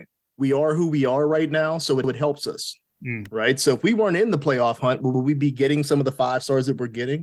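At 2.04 to 2.14 s and again at 5.14 to 5.24 s, overlapping chunks make a short stutter in the speech. Each join replays 100 ms, and the 3.1-second spacing suggests 3-second chunks. At 3.25 s, a sharp snap sits on top of the audio. This is likely an electrical switching spike picked up from nearby equipment.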